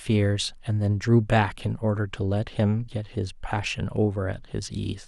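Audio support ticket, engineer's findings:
Nothing stood out on listening to the speech in this clip.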